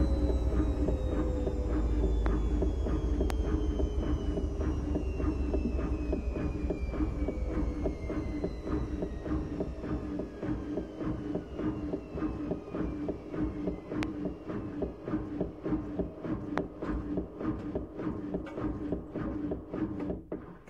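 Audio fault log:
2.26 s, 3.30 s, 14.03 s, 16.58 s: loud pop. Each is a single sharp pop of about 20 ms, peaking roughly 20 dB above the surrounding sound, which carries on underneath. The likely cause is a sudden voltage pulse, such as static or a switch transient, added to the signal.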